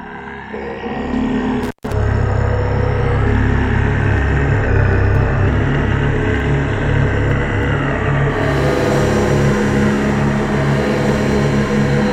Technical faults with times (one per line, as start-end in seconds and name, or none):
1.62-1.93 intermittent contact
4.67-5.48 drift correction step